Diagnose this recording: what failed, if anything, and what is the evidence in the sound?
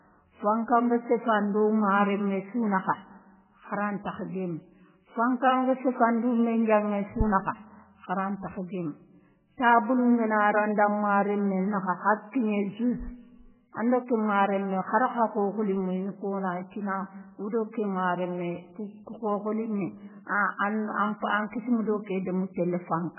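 The codec stage is where this went wrong, and it's throughout the whole clip. The speech has nothing at all above 3 kHz, a hard treble wall, and the damage is heavy: a watery, swirling quality as weak frequency lines blink in and out frame to frame, with smeared attacks. That's likely MP3 compression starved of bits, pointing to a bitrate around 8 kbps, so the encoder chopped the top end and zeroed whatever its hearing model judged expendable.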